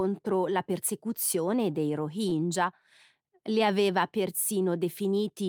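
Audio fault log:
2.29–2.34 s, short stall from a late packet: after "la persecuzione dei", the jitter buffer ran dry and the sound was stretched 22 ms. Nothing is lost.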